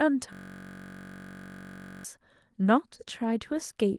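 From 0.33 to 2.05 s, a system hang loop repeats one 21.3 ms slice, fitting a 1024-sample buffer. The frozen ring buffer produces a steady 47 Hz buzz.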